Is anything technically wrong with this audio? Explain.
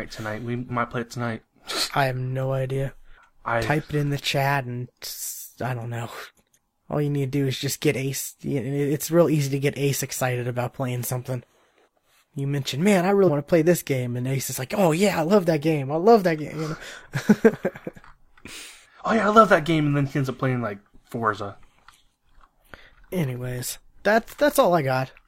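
Yes. Compressed frames are skipped at 0.65, 13.24 and 18.95 s. At 0.65 s, before "might play it tonight", and at 13.24 s, between "mentioned man I" and "to play this game", about 100 ms of speech vanishes. At 18.95 s about 50 ms goes. Each jump fits whole 46.4 ms frames being dropped.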